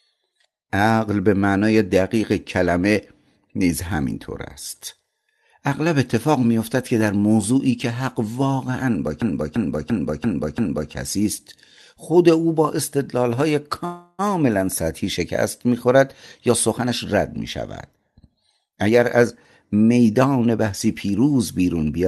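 From 9.22 to 10.92 s a system hang loop occurs: the computer stalled while the sound hardware kept replaying one 341 ms stretch of its ring buffer, which fits a 16384-sample buffer. The result is a machine-gun stutter repeating five times at about 2.9 Hz, with essentially no audio lost.

From 13.85 to 14.21 s there is a call audio freeze, likely from delayed packets draining the jitter buffer. The last sound is stretched into a fading buzz or hiss for 332 ms. Nothing is missing afterwards, but the rest of the speech is pushed 332 ms later.

Two jitter buffer speed-ups follow as the receiver trims short pitch-period pieces to shed the built-up delay. From 16.49 to 17.13 s, speech runs about 15% fast with roughly a tenth of a second removed. From 17.91 to 19.34 s it runs about 14% fast with roughly a fifth of a second removed. In both stretches the pitch stays the same but the delivery sounds hurried.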